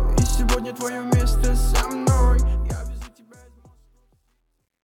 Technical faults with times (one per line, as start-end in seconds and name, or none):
2.31-4.87 truncation distortion on a fade